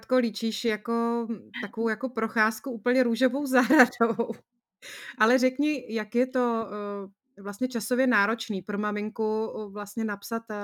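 Throughout the speech, sample clock jitter adds a faint hiss that swells on loud, bright syllables and disappears in pauses. The converter's clock wobbles by roughly a microsecond or two, so steep waveform slopes are mis-sampled. The error sits about 40 dB down, appearing on a spectrogram as diffuse high-frequency haze tracking louder passages.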